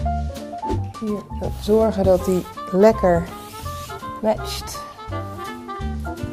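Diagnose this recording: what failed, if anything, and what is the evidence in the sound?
The failure is DAB burbling at the codec stage: a brief cluster of watery blips at about 1.47 s, where individual sub-bands get short blips of noise. Residual bit errors from weak reception slipped past error correction into the MP2 stream, corrupting scale factors and samples so individual bands decode at wrong levels. The shortness of the burst points to a couple of damaged frames, and its isolation fits a very low bit error rate, under a tenth of a percent.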